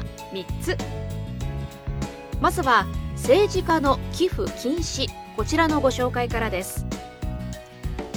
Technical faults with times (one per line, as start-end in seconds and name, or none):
3.70 dropped samples
6.10 dropped samples
6.95 dropped samples